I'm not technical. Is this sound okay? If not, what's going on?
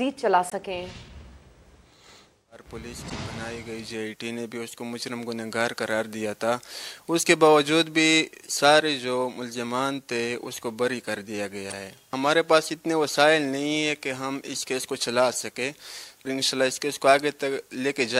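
No. There are three quick glitches at 0.50–0.53 s, 3.08–3.12 s and 11.70–11.73 s. These are damaged data in a compressed stream: corrupted bits in the file make the player misread that moment and briefly lose its place.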